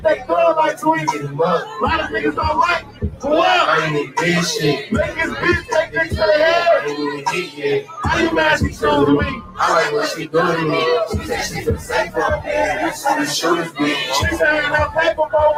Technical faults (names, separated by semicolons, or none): noise suppressor applied to music or sounds; sound cut by the noise suppressor